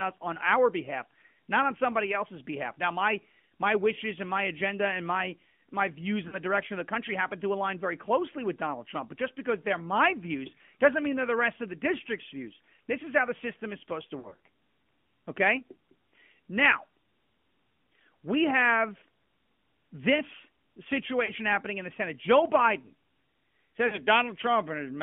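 Throughout, the speech sounds thin, boxy and plainly buzzy, confined to a phone band of about 150 Hz to 3.4 kHz. This is the AMR narrowband mobile codec at 10.2 kbps, which rebuilds the voice from a vocal-tract model with sparse pulses and discards everything above 4 kHz.

Lost AMR speech frames cause brief warbling dips. The first, at 6.28 to 6.36 s between "and my my views" and "direction of the country", lasts 40 ms, which fits two frames. After "system is supposed to", scattered gaps totalling 120 ms smear sound across 14.20 to 14.37 s. Further dips occur at 21.26 to 21.31 s just before "happening in the" and at 23.88 to 23.99 s. In each case, the decoder repeats the last good settings with fading gain.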